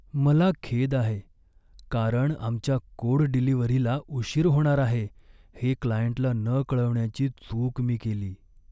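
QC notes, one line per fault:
Nothing stood out on listening to this speech recording.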